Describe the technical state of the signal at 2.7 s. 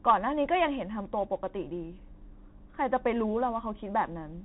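At 2.7 s the signal is passing through a Bluetooth CVSD headset codec, as it does for the whole clip. CVSD encodes each sample as a single up-or-down bit and adapts its step size, and here it sounds like the 64 kbps headset link. The band stops at about 3.8 kHz, so the speech sounds narrow and muffled, and the one-bit coding leaves plainly audible damage: a gritty, scratchy edge on the speech.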